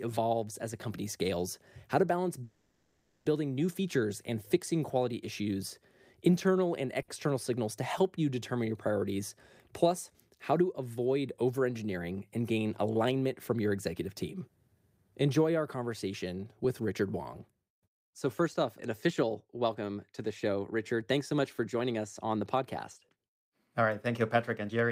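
From 2.43 to 3.28 s, just after "scales how to balance", a call audio freeze fills about 0.82 s with a fading buzz or hiss. Packets were likely held up and the jitter buffer ran dry. The speech then resumes exactly where it stopped, so nothing is lost, unlike a dropout.

At 7.02 to 7.11 s, between "quality issues internal and" and "signals to help you", a short stall from a late packet stretches one sound by about 60 ms with a slight buzz or dip. It is much briefer than the freeze and adds no silence.

Jitter buffer speed-up follows after "our conversation". The speech runs about 6% fast from 16.64 to 18.65 s, then about 7% fast from 19.07 to 22.63 s and again from 23.09 to 24.90 s. Tiny pitch-period slices, roughly half a second in total, are removed, so the speech sounds hurried but the pitch doesn't change.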